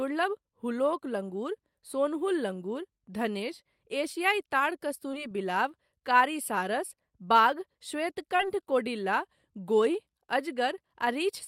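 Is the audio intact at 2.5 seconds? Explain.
Yes, the speech at 2.5 seconds is intact, with no audible fault at that moment.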